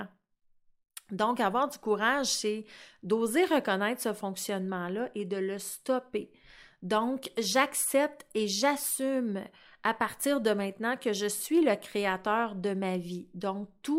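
No technical faults can be heard in the speech recording; the signal stays steady and intact throughout.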